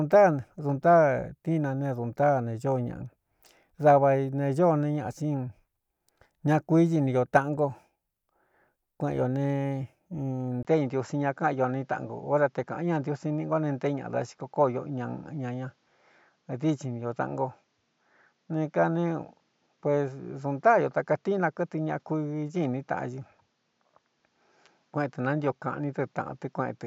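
At 10.63 s the speech drops out for a brief 20 ms gap, then comes back duller and boxier, with nothing above 7.6 kHz, all the way to the end. The level stays about the same, but a new, faint noise floor sits roughly 45 dB under the speech. That's most likely the input switched to a poorer device: the system swapped microphones mid-recording, and the new one has a narrower band, a different tone and its own hiss.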